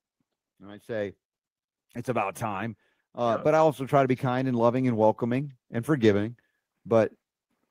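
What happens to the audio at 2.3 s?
The automatic gain control judged the input too quiet and began raising its gain at 2.04 s, climbing by about 8 dB until 6.35 s. At 2.3 s that automatic gain rise is under way, so the speech and background noise swell together, gradually getting louder.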